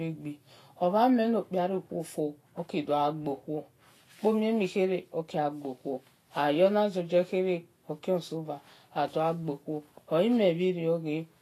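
Vorbis compression, plainly audible throughout the speech: nothing above 14.2 kHz, treble turned to grainy hiss rather than dulled, likely an encode near 34 kbps.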